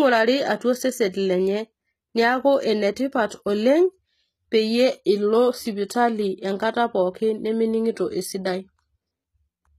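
Throughout the speech, the treble sounds synthetic: s sounds turn gritty and lispy, and nothing survives above 14.9 kHz, likely from HE-AAC compression at a low bitrate near 20 kbps rebuilding highs by band replication.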